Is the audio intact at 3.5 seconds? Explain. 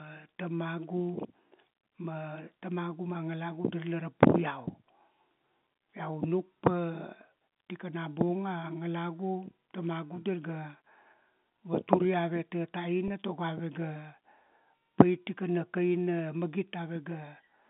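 Yes, the audio is intact at 3.5 seconds, with the speech carried cleanly through the G.711 telephone coding and its narrow telephone band.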